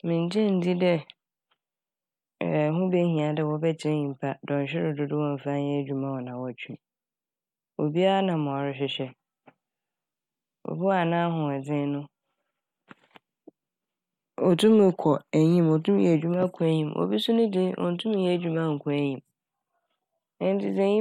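No technical faults can be heard anywhere in the speech.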